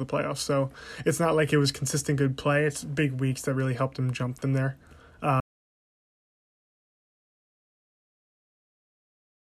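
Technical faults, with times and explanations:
5.40 s to the end: audio dropout to silence. The input feeding the recorder was lost, likely through a disconnected device, a failed link or an accidental mute, while the recording carried on writing silence. At 5.40 s the speech stops abruptly mid-flow and the remaining four seconds or so are dead silence, with no room tone or noise floor beneath it. Nothing spoken after that point was captured, and the speech never comes back before the clip ends.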